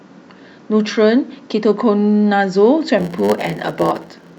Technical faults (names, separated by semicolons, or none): block size mismatch (padded)